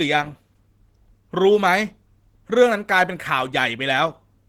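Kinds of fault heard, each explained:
Opus compression: the speech sounds plainly hoarse, though it still reaches 20.2 kHz. It likely comes from Opus hybrid mode at a low bitrate near 16 kbps.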